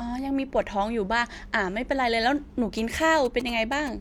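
GSM signalling bursts break into this speech clip from 2.78 to 3.89 s as a galloping dit-dit-dit of short buzzes repeating at about 217 Hz, sitting roughly 15 dB below the speech. A nearby 2G phone exchanging short control bursts with its network, with no call under way, radiates pulsed RF that the audio circuitry rectifies. The 217 Hz rate is GSM's frame timing, and that is what gives the buzz its pitch.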